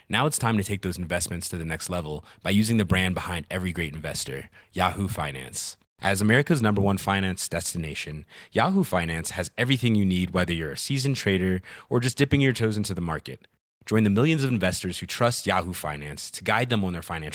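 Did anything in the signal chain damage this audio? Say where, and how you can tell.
No, nothing in the chain damaged this speech.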